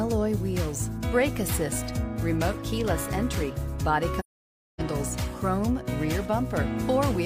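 AAC frame loss with muting occurs from 4.19 s to 4.81 s, where the sound drops out for about 0.6 s, a gap that fits roughly fourteen lost AAC frames. With no data for those frames, the decoder filled their spectrum with zeros. Because AAC builds its output from overlapping windows, the sound fades down into the silence and fades back up afterwards, each over about one frame, leaving a soft-edged hole rather than an abrupt cut.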